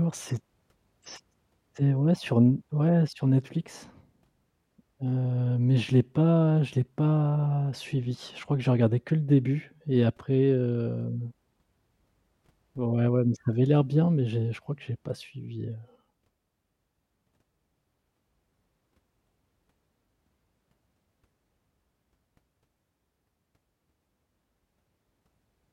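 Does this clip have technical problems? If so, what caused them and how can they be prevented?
No, nothing in this recording stood out as a technical problem on listening, so there is no cause to trace and nothing to prevent.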